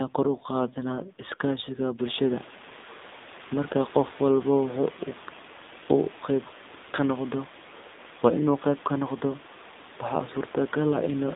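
Speech heard throughout through an AMR narrowband mobile codec: the line is confined to about 200 Hz to 3.7 kHz, with nothing passing above 4 kHz, and the coding damage is plainly audible as a buzzy, synthetic voice. That degree of artefact points to a low AMR-NB mode, around 7.4 kbps, where few pulses per subframe drive the vocal-tract model. The room noise, which rises by about 19 dB around 2 s and then sits about 23 dB below the speech, is coded into a swirling warble.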